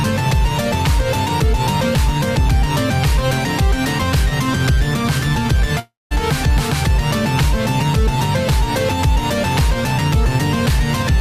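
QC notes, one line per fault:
5.79–6.13 s, long network dropout: the sound smears into a fading buzz, then goes silent, and resumes with roughly 320 ms missing, likely from lost packets.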